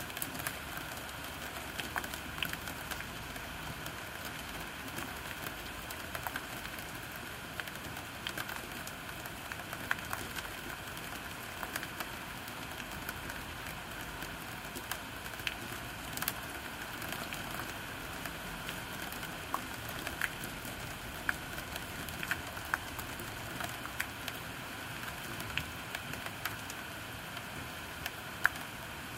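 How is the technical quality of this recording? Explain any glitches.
The recording has one glitch: a brief drop in streaming quality. From 2.84 to 4.84 s the adaptive stream fell back to a lower bitrate, as players do when the connection slows, then recovered. The thinner encoding spends fewer bits on the treble, consistent with a switch from a mid-rate AAC stream to an HE-AAC one at around 40 kbit/s. Compression artefacts rise, and quality changes abruptly at both ends, with no gap or dropout.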